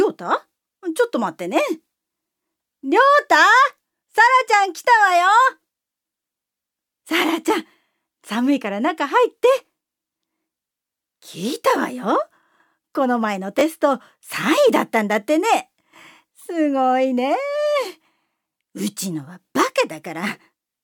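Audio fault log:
13.59–13.61 s: chunks out of order. A 10 ms chunk plays one chunk late, swapping places with its neighbour, giving a brief jumbled blip with three hard joins.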